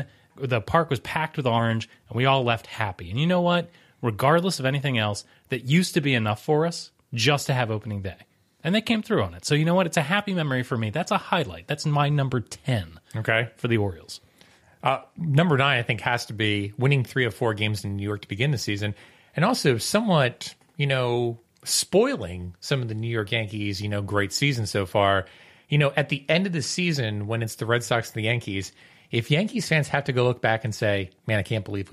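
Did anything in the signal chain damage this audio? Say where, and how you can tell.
No, nothing in the chain from capture to playback has audibly damaged this speech recording. No stage has left a mark that can be heard.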